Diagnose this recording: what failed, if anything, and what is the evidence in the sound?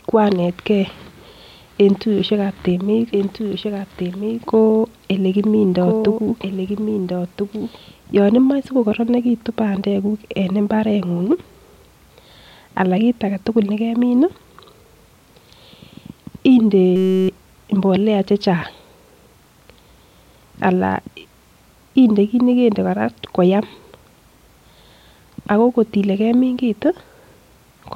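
Doubled audio track, 3.13 to 7.77 s, playback or capture routing stage: a full-band second copy of the speech trails the original by about one and a half seconds, some 5 dB quieter, with no decay or room colour, and it cuts in and out abruptly. The likely cause is a second, slower capture path or a misaligned edit.

System hang loop, 16.96 to 17.29 s, driver or buffer stage: one 5.33 ms slice repeats exactly, dozens of times, producing a steady buzz at 188 Hz, which fits a 256-sample ring buffer cycling while the system froze. Roughly 300 ms of speech is lost.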